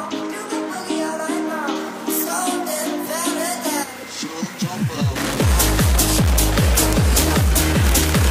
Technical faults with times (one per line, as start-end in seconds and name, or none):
1.75-8.30 pre-emphasis left on